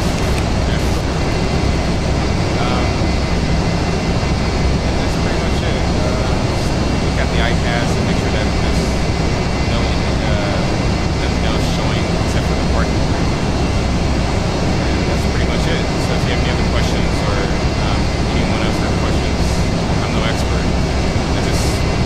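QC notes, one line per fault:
0.0–2.0 s, Wi-Fi interference: a steady ticking about ten times a second, roughly 20 dB below the signal. A nearby Wi-Fi radio's beacon, repeating every 102.4 ms, is being rectified by the audio circuit and heard as regular clicks.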